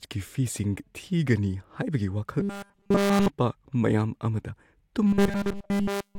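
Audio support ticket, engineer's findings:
Robotic sound from repeated short buffers, 2.40–3.28 s (before "ꯃꯌꯥꯝ ꯑꯃꯗ") and 5.07–6.18 s (after it): solid 200 Hz metallic buzz, likely a starved buffer looping roughly 5 ms chunks.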